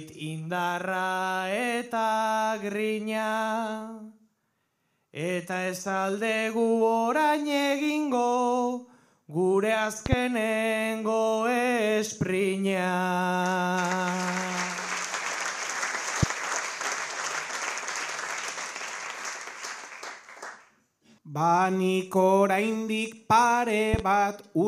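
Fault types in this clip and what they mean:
loud pop: A sudden voltage pulse, likely from a plug, switch, static or a driver glitch, enters the signal and shows as sharp pops about 15 dB above the audio: double pops at 10.06 to 10.15 s and 23.94 to 24.02 s, a single at 16.23 to 16.26 s, with the sound continuing underneath.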